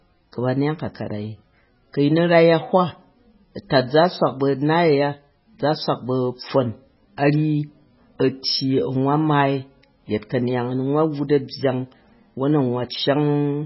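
MP3 compression, likely the cause, affects the speech from start to finish. Nothing is present above 5.5 kHz, so the treble is sharply cut off and s sounds lose their edge. The damage is heavy, which fits a very low bitrate of around 16 kbps. With so few bits, weak frequency lines drop in and out between frames, giving the speech a watery, swirling texture with metallic chirps on sibilants and smeared consonant attacks.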